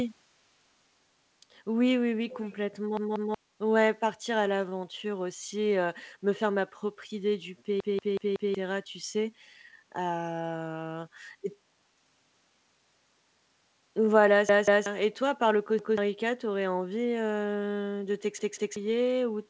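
A speech recording over a call link carries two faults. The far end's echo canceller likely let its loudspeaker pickup through, so from 2.32 to 2.55 s an echo leak adds a faint copy of the voice about 20 dB down, trailing by 386 ms. In the repeated buffer faults, audio arrived late and playback looped the last chunk of roughly 186 ms, which fits an 8192-sample buffer. Each one is heard as a stutter with hard joins at the repeats and some of the following speech missing. The last chunk plays two extra times at 2.97 to 3.34 s, four at 7.80 to 8.55 s, two at 14.49 to 14.86 s, once at 15.79 to 15.98 s and twice at 18.39 to 18.76 s. The band stops at 8 kHz, consistent with a wideband call codec such as G.722.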